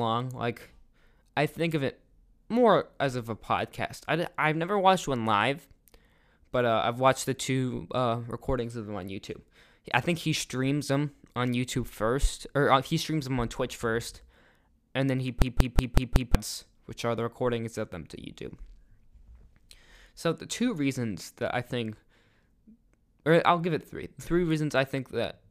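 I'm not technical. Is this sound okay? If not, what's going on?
No. From 15.42 to 16.35 s the speech sticks and repeats one short scrap, about 0.19 s long, five times over, like a machine-gun stutter at about five per second. This is a system hang loop: the computer froze while the sound hardware kept replaying the same stored chunk, which fits an 8192-sample buffer. About a second of real speech is lost. Unlike a brief dropout or glitch, the repeats are exact copies.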